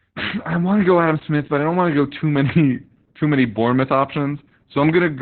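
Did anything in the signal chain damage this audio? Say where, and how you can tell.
Yes, at the codec stage: Opus voice compression throughout the speech. Nothing reaches above 4.3 kHz, so it's muffled and hoarse with a slightly robotic edge. That narrowband SILK sound, with coarse excitation coding, points to a bitrate of around 8 kbps.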